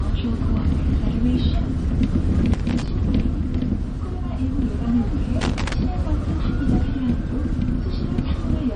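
A clip of everyday sounds, most likely squeezed through MP3 compression at a low bitrate around 40 kbps. It has nothing above 9.6 kHz, plus plainly audible watery, swirling artefacts and smeared attacks throughout. A loose connector making and breaking contact chops the signal, producing irregular bursts of crackle from 2.54 to 2.88 s and from 5.41 to 5.74 s.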